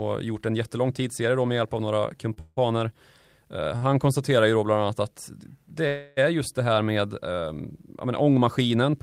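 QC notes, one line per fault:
2.33–2.38 s, short stall from a late packet: right after "med hjälp av några" the sound is held for about 28 ms with a faint buzz, then resumes from the same point, so everything after it lands 28 ms later. The jitter buffer emptied while a packet was late, and the receiver stretched the last sound to fill the wait. On a spectrogram the harmonics run flat and smeared for that instant. On the waveform one cycle shape repeats instead of evolving.
2.40–2.59 s, call audio freeze: a second, longer hold follows almost immediately. The last sound carries on as a fading buzz for about 164 ms, ending in roughly 10 ms of silence before the audio continues, with nothing skipped. The likely cause is packets held up in transit and a drained jitter buffer. The spectrogram shows frozen horizontal bands that thin out and briefly go blank. The waveform shows decaying repeated cycles, then a flat line.
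3.77–3.91 s, short stall from a late packet: a 50 ms hold, plus a few extra milliseconds of filler, stretches the current sound with a slight dip in level, then carries on where it stopped. The mechanism is the same late packet and empty buffer. On the spectrogram this appears as a stretch of static, smeared harmonics. On the waveform it is a short section of near-identical repeating periods at slightly reduced amplitude.
5.87–6.19 s, call audio freeze: between "bland annat att det" and "är just det här" the sound hangs as a continuous, fading buzz for about 295 ms with no silent stretch, and then picks up again with nothing lost. It likely has the same origin as the earlier freeze. On the spectrogram a long run of frozen, gradually dimming bands cuts across the normal pattern. On the waveform a repeated cycle decays in amplitude over roughly a third of a second.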